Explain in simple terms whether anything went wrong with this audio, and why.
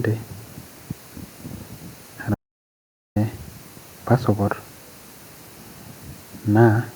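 At 2.35 seconds the speech suddenly cuts off mid-flow and the clip goes completely dead, with not even the faint background hiss of the room, until the sound snaps back at 3.16 seconds. That is an audio dropout to silence, lasting about 0.81 seconds. The likely cause is that the input signal was briefly lost, perhaps through a loose connection or an accidental mute, while recording carried on writing pure silence. Whatever was said in that gap is gone.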